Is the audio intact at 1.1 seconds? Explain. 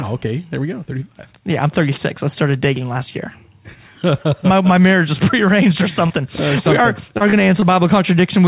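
Yes, the audio is intact at 1.1 s, with no dropout, click or other fault at that point, only the narrowband sound of the call path, which carries nothing above 4 kHz, as fits a G.711 A-law link.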